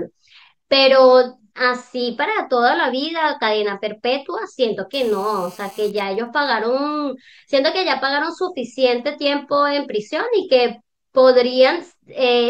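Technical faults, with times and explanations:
4.93 to 5.90 s: GSM phone buzz. A nearby 2G phone in a call pulses 217 times a second, and the audio circuit rectifies it into a raspy, harmonic-rich 217 Hz buzz, about 27 dB below the speech.
5.91 to 6.63 s: GSM signalling bursts. The phone's caller falls silent, so only sparse burst groups reach the circuit. They come through as even ticks with a longer 217 Hz buzz twice a second, well below the speech.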